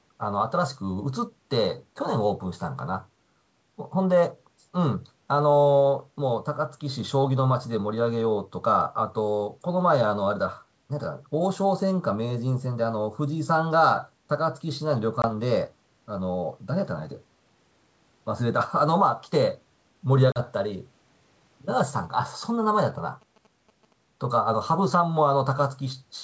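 Packet loss on an ADPCM call first appears at 15.22 s. A gap of 20 ms, about one packet's worth, is filled with silence, leaving a sharp-edged hole in the speech. Because the receiving decoder's adaptive predictor and step size stop tracking the sender's during the gap, the speech resumes slightly distorted. It settles within some tens of milliseconds. A second, longer loss follows at 20.32 to 20.39 s. Its 40 ms hole, about two packets, recovers the same way.

GSM signalling bursts run from 21.80 to 23.93 s. A nearby 2G phone is exchanging short groups of radio bursts with the network while signalling, and the audio circuitry rectifies that RF energy into sound. The result is a galloping dit-dit-dit of short buzzes at about 217 Hz, sitting roughly 30 dB below the speech. The G.722 wideband coding stays clear up to its usual upper limit throughout this interference.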